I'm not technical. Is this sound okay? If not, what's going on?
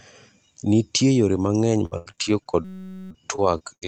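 No. Repeated packet loss (robotic sound) runs from 1.79 s to the end: pieces of the speech keep going missing and get patched over, so it turns choppy. A system hang loop hits from 2.65 to 3.11 s: the computer briefly froze and one tiny 5.3 ms scrap of sound replayed 87 times, making a steady buzz at about 188 Hz.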